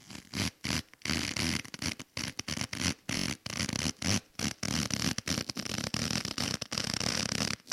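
New audio failed to reach the output in time, so the device replayed its last 21 ms buffer, which fits a 1024-sample buffer. This repeated buffer sounds four extra times at 3.18–3.26 s as a hard-edged stutter, then once at 4.65–4.67 s as a short stutter.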